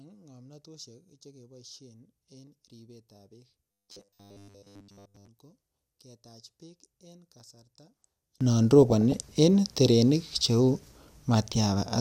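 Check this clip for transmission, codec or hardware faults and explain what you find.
Three kinds of fault are present: a polarity problem over the first two thirds of the clip, a robotic stretch inside it, and two short bursts of DAB burbling near the end.

From 0.0 to 8.41 s, summed to mono, the speech drops by about 29 dB and survives only as a faint residue. The likely cause is one channel inverted. With one side's polarity flipped, the centred speech, common to both channels, cancels in the mono sum, and only the small left-right difference remains. That residue is what carries the sound through this section.

Between 3.72 and 5.27 s the speech becomes a rigid, metallic buzz pitched at 100 Hz that still tracks the syllables loosely. This is likely robotic sound from repeated short buffers. When fresh audio arrives late, the playback side loops the last fragment instead of stalling. 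A 100 Hz repetition fits a loop of about 10 ms. Nearly all of the real signal in that span is replaced by these repeats.

At 8.82 to 9.21 s and again at 11.64 to 11.76 s there is DAB burbling: short blips of noise laid over the speech. Weak reception lets a small fraction of a percent of bit errors slip past error correction into the MP2 stream. The corrupted samples put short noise blips in single sub-bands, and corrupted scale factors make sub-bands jump in level for up to a frame. The first burst covers 17 frames, and the second is shorter.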